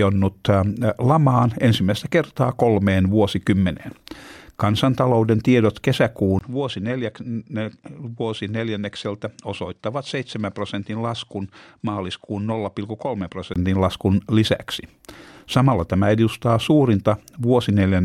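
A speech clip. From 6.39 s to 13.56 s the sound turns duller, with nothing above 9.8 kHz, and drops about 10 dB in level. A brief gap marks the change, and a faint new noise floor appears. This likely comes from the input switching to a poorer device.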